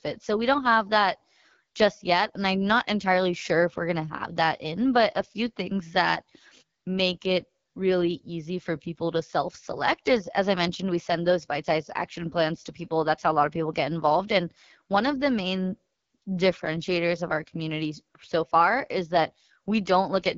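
From start to finish, the speech carries AMR wideband (HD Voice) codec damage that is plainly audible. Nothing sounds above 7.4 kHz, and the voice has a rough, raspy grain, which fits one of the codec's lowest modes, around 8.85 kbit/s, where too few bits are left to model the vocal tract and its pulse excitation cleanly. The wider band rules out narrowband telephone coding, and the rasp separates it from a simple low-pass filter.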